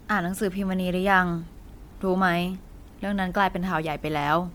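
Throughout, the speech sounds swirly, hollow and smeared, with blurred attacks and nothing above 19.9 kHz, likely generation loss from around seven MP3 re-encodes at 128 kbit/s.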